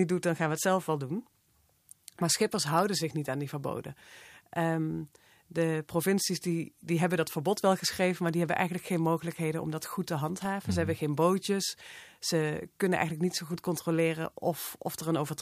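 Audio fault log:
10.38–10.47 s, loose connector crackle: right after "om dat goed te", a short, ragged burst of crackle and scratching cuts across the speech for under a tenth of a second. A worn or dirty contact is making and breaking many times in quick succession, chopping the signal and popping wherever there is DC on the line. Unlike a clean digital dropout or a single codec click, the burst is irregular and gritty.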